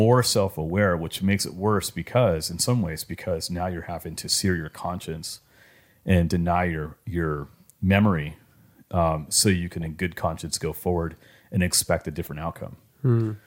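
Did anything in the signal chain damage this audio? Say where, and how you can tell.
Yes, DAB burbling in the codec stage. Weak reception let bit errors past error correction into the MP2 data, so wrong samples put short blips of noise in single sub-bands. Burbling appears from 9.73 to 9.86 s, after "memory um so you", and 12.24 to 12.29 s, after "forward and expect a".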